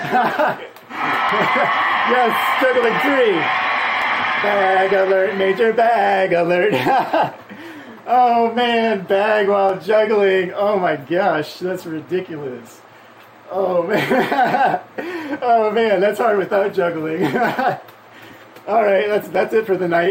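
Five isolated sharp clicks puncture the audio at 1.29, 2.84, 4.02, 9.69 and 19.35 seconds, each a single instant with nothing audibly missing around it. These are most likely dropped samples: at each point a fraction of a millisecond of the stream has vanished, so the waveform leaps straight from one value to a later one. That abrupt discontinuity produces the tick, visible as a thin vertical line spanning the spectrum.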